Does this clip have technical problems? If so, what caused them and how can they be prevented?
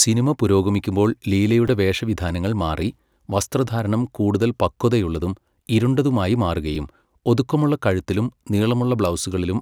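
Yes. Two repeated-buffer glitches in this speech sound like brief clicks or buzzes at 1.68 s and 6.75 s. Each time, new audio arrived late, so the device replayed the last piece twice more. The repetition fits a 5 ms buffer, and nothing appears to be lost. On a waveform, each shows three identical short segments with hard joins. On a spectrogram, each appears as a thin vertical stripe. Larger buffers or a higher-priority audio thread would prevent these underruns.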